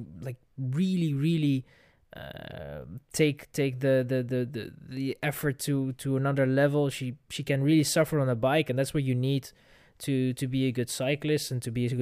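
Nothing goes wrong anywhere in this speech recording; there's simply no technical fault to point to at any moment.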